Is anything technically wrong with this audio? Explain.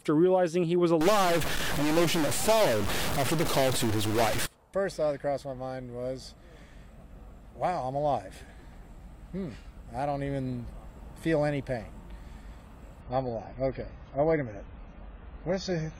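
Yes, two faults stand out.

From 1.01 to 4.46 s the sound turns noisy and distorted, and the quiet moments fill with a gritty noise rather than falling silent. This is most likely a stuck bit, one data line held at a fixed value, so about half of all samples shift by that bit's weight. Unlike clipping, which bites only on loud peaks, this distortion follows the waveform everywhere and does not spare the quiet moments.

From 13.01 s to the end there is an adaptive stream at a lower bitrate. The quality drops abruptly with no gap. Everything above 7 kHz vanishes, and the remaining sound takes on a swirly, smeared codec texture. The change fits a switch from about 96 kbit/s to 16 kbit/s AAC-LC. A plain low-pass filter would dull the top without adding artefacts. Here the smearing appears at the same instant as the lost treble.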